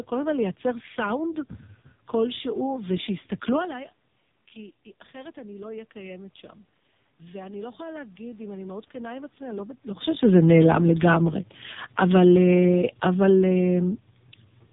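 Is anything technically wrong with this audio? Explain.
Yes. The whole clip went through a narrowband mobile codec, and the automatic gain control shifts level twice.

AMR narrowband mobile codec, throughout: The speech was encoded with AMR-NB, which rebuilds each 20 ms frame from a vocal-tract model fed by only a few pulses. Here the damage is heavy, which fits its low 5.15 kbps rate. Nothing above 3.8 kHz survives, so the speech sounds boxed-in and dull, with a buzzy, synthetic edge, and the room noise churns into a swirling warble.

Automatic gain rising, 7.31 to 10.14 s: The input fell by about 17 dB, and the gain control judged it too quiet, so it slowly raised its gain by about 6 dB over nearly three seconds. The speech and the room noise swell together rather than the speech alone coming forward. The recovery is only partial, so the passage stays quieter than before the drop.

Automatic gain falling, 12.14 to 13.89 s: The gain control decided the input had become too loud, or its background noise too strong, and eased its gain down by about 3 dB over roughly 1.75 s. 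The speech starts out louder, then sinks gradually, and the background noise drops with it at the same rate. This sets it apart from the talker's own movements around 3.5 and 10 s, which change the speech level at the microphone.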